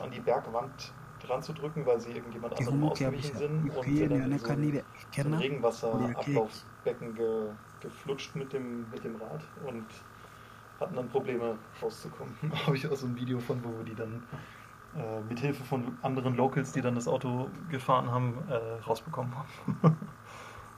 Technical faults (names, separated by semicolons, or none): speech suppressed in double talk; echo leak